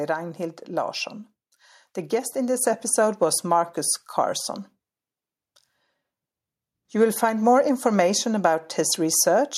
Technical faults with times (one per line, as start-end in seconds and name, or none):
2.61 microphone volume stepped up